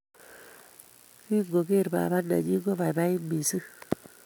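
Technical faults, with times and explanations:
No technical faults detected.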